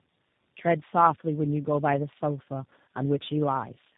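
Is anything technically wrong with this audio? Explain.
Yes, tandem speech coding runs through the whole clip. The speech sounds like it passed through about three speech codecs in turn, each re-coding the last one's damage. That leaves it rough, muffled and warbly, with nothing above about 3.8 kHz.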